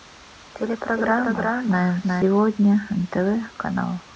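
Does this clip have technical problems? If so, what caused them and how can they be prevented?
Yes. A doubled audio track runs from the start to 2.22 s, where it stops abruptly: a full-band copy of the speech trails by around 0.4 s, a few dB quieter. Unlike an echo, it has no decay or room colour. The likely cause is a second capture path or misaligned edit. Prevent it by routing the source through one path only and checking edits for duplicate, offset layers.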